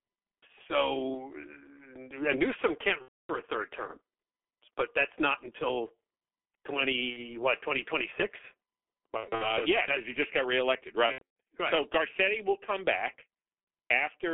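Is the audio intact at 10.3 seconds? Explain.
No. At 10.3 s, as throughout the clip, the speech carries heavy G.723.1 codec damage: at about 6.3 kbit/s, 30 ms frames and a slowly updated voice model smear consonants, and the band from 300 Hz to 3.4 kHz leaves it muffled and hoarse.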